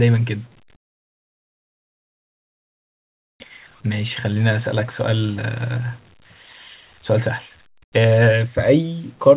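From 7.84 to 7.92 s the background becomes flat hiss about 12 dB quieter, likely comfort noise in place of the background while transmission paused.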